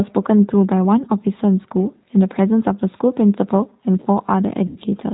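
From the start, the speech carries G.729 codec damage, plainly audible: a slightly rough, synthetic edge with nothing above 4 kHz, which fits 8 kbit/s G.729A. Unlike generic low-pass filtering, each sound is rebuilt from a vocal tract model and sparse pulses, so the roughness is buzzy rather than merely dull.

From 4.67 to 4.79 s comes VoIP packet loss concealed by the speech codec. About 90 ms of audio, consistent with three lost 30 ms packets, is replaced by the decoder stretching its last pitch and filter into a fading buzzy tone or coloured noise. Unlike a plain dropout, the voice stays weak briefly after packets return.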